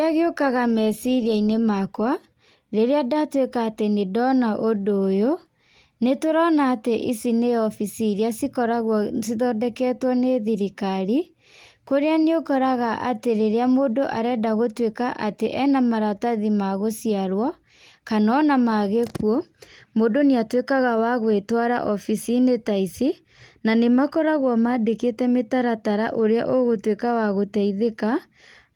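Nothing stood out as a fault on listening to this speech recording.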